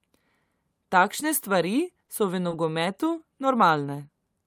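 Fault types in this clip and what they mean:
Short stall from a late packet: at 2.05 and 2.49 s the speech hangs, a sound held about 20 ms too long before carrying on with nothing lost. A packet arrived late, the jitter buffer ran dry, and the receiver stretched the last sound while waiting.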